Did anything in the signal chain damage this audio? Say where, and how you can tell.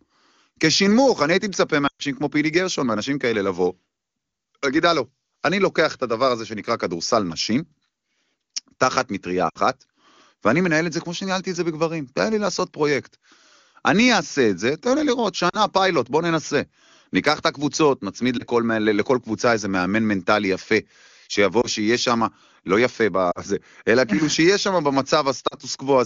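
Yes, there are lost AMR speech frames on the radio link, at 1.87–2.03, 9.49–9.58, 15.49–15.58, 18.38–18.44, 21.61–21.67, 23.31–23.41 and 25.47–25.55 s. The decoder concealed each failed frame by repeating the last good pitch and vocal-tract settings at falling gain. The result is a brief dip for the single lost frames and a fade to near silence within two frames for the longer runs, longest near 2 s, where about 120 ms is lost. That sets it apart from network packet loss with zero fill, which leaves hard silent gaps or clicks. Recovery sounds briefly weak through the otherwise clean 23.85 kbit/s wideband codec.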